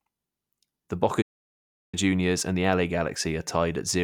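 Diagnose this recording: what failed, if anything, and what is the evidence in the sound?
A playback stall: the speech stops at 1.21 s and stays silent for about 0.71 s, resuming at 1.95 s. The player likely ran short of data.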